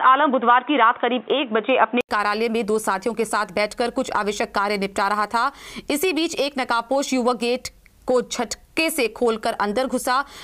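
From the start to 2.09 s, the system likely captured through a poorer input device before an input switch restored the normal one. That stretch sounds dull and boxy, with nothing above 3.8 kHz, a faint noise floor of its own and a level a few decibels different. An 80 ms silence marks the switch.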